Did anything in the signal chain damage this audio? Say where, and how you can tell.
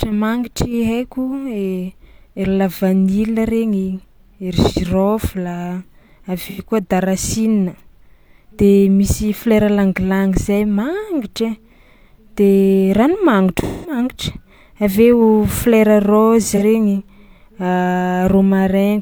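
Yes. AAC frame loss with concealment occurs at the codec stage at 6.49–6.60 s, 13.62–13.98 s and 16.56–16.63 s. Each patch sounds smeared and noisy because the decoder rebuilt missing audio from the last good spectrum. The lengths fit two, five and one lost frames.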